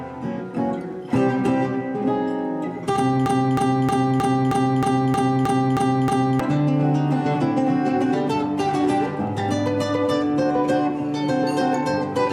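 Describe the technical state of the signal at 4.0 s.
At 4.0 s the signal is caught in a broken-record loop running from 3.26 to 6.40 s. A 313 ms fragment repeats exactly, back to back, ten times. The likely cause is a stalled player or stream resending its last buffer. The audio meant for that span is lost.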